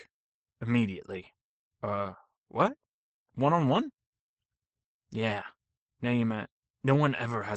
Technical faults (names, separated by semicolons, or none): Opus voice compression